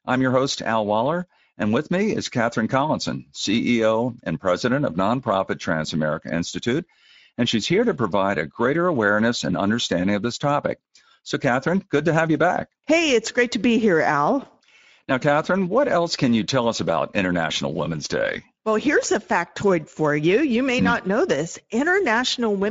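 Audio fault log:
throughout: Speex codec. The speech is plainly hoarse and noisy because the CELP coder has too few bits for the excitation, which fits a bitrate near 17 kbps. Nothing is heard above 7.7 kHz. A rasping hoarseness, not swirling or warbling tones, separates it from transform codecs.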